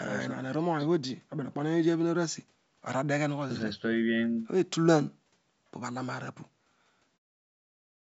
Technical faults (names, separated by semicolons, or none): none